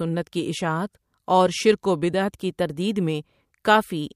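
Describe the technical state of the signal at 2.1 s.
At 2.1 s the speech signal is intact, with no dropout, clipping, glitch or other audible technical fault.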